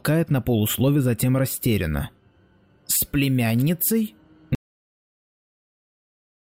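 The audio cuts out abruptly at 4.55 s and never returns: from there to the end, about 2 s, there is dead silence, with no room tone or background hiss left underneath. This is an audio dropout to silence, and whatever was happening in that stretch is simply missing. The hard cut mid-flow and the silent gap most likely mean the input was lost, through a disconnected device, a failed link or an accidental mute, while the recorder kept writing silence.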